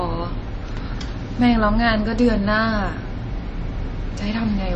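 Throughout the speech, nothing is present above 8.2 kHz and watery, swirling codec damage is plainly audible, likely MP3 compression at a low bitrate fitting about 32 kbps.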